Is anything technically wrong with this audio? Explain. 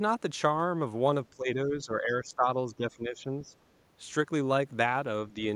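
Yes. The speech is pushed down three times, most likely speech suppressed in double talk. From 1.31 to 2.48 s it sinks by roughly 15 dB. From 2.67 to 3.53 s it dips by about 10 dB. At 5.31 to 5.43 s there is a brief, shallow dip of about 5 dB. An echo canceller facing both sides at once cannot separate this talker from loudspeaker echo. It then turns everything down. The voice fades in these stretches.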